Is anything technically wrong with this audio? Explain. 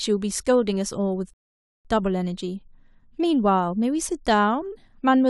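Yes. From 1.34 s to 1.85 s the speech drops into silence for about half a second, then picks up exactly where it left off. This is a rebuffering stall: playback ran out of downloaded audio and waited for more, adding 0.51 s without losing anything.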